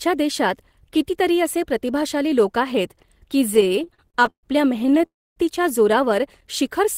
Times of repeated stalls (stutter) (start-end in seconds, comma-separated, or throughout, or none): 3.54-5.04